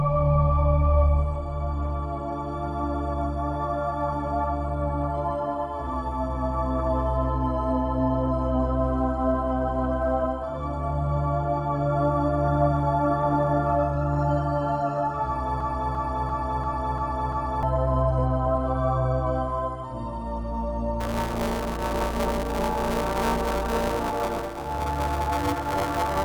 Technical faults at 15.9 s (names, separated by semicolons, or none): broken-record loop